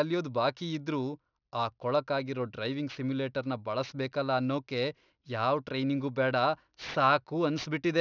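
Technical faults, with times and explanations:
Throughout: aliasing. The speech was taken down to a lower sample rate with no anti-aliasing filter, and the folding point sits at 6 kHz, which fits a 12 kHz rate. Sibilant energy that belonged above 6 kHz reflects back below it as tones unrelated to the speech, about 20 dB under the signal. Consonants like s and sh come out gritty and metallic, and the spectrum stays dense right up to the 6 kHz edge instead of rolling off.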